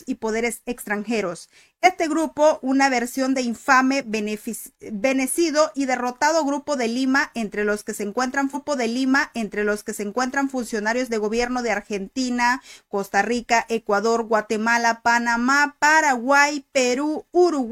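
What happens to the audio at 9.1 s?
At 9.1 s the player is replaying material it has already played: a stream segment was repeated, fetched or queued a second time, so the same chunk of the programme goes out twice. From 8.50 to 10.51 s the audio jumps back and plays about 2.0 s over again, adding that much time to the clip. A small blip marks the jump back, after which the repeated passage runs as before.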